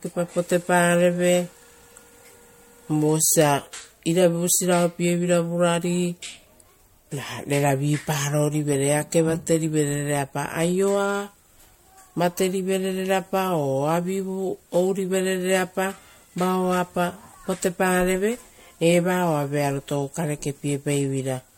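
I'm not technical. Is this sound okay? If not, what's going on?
No. The speech was likely squeezed and unpacked through MP3 compression several times over, about four rounds, causing generation loss. Each round adds damage, so throughout the clip the voice sounds swirly, hollow and smeared, with sharp consonants blurred.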